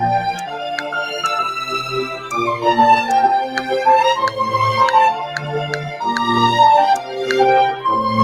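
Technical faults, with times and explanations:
Throughout: noise suppressor applied to music or sounds. A suppressor tuned for speech stays active on this audio. It treats steady tones, ambience and decaying tails as noise and pulls them down. Sharp onsets pass through, but sustained parts lose level soon after. The gain keeps moving as a result, swinging by roughly 10 dB. So the sound pumps and thins, rising on each attack and sinking while it holds.
0.46–0.93 s, 2.11–2.33 s, 5.23–5.52 s, 5.72–6.02 s and 7.01–7.17 s: sound cut by the noise suppressor. In each span the suppressor mistakes part of the sound for noise and cuts it harder than the rest. The deepest drops are about 6 dB in the first three spans and about 7 dB in the last two. Each cut lasts only a fraction of a second. Held or fading sound dips, and its decay is shortened.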